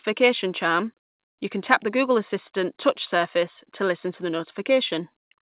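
Speech carried over a WebRTC call path shows no technical fault, and nothing in it reaches above 4 kHz, which is the narrow telephone band a G.711 mu-law call codec leaves.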